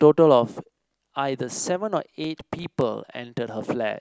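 From about 2.24 to 2.82 s the speech picks up a burst of processor overload crackle, a gritty tearing laid over the sound for just over half a second. What's happening is that the processor can't finish its small audio buffers on time, and around seven of them miss their deadline. Each miss drops in a sliver of silence a few milliseconds long with hard edges, which fits buffers of roughly 4 ms. Strung together, those clicks read as crackle until the load eases.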